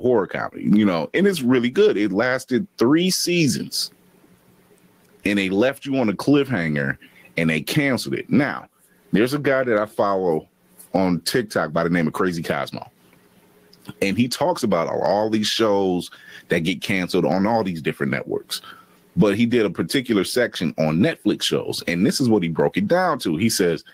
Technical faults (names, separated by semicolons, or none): gain pumping